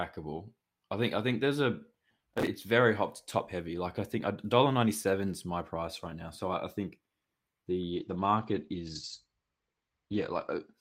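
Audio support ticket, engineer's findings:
Gritty crackle, 2.19–2.47 s, between "I think there's a" and "very hot top heavy". Processor overload crackle: dozens of missed deadlines, skipped audio, consistent with buffers of around 1.5 ms.

Muffled, rough sound from 7.93 s to 10.79 s, lowest for 2.61 s. Call bitrate drop: encoder starved, consistent with roughly 40 falling to 13 kbps, bandwidth cut from 20 kHz to 8 kHz.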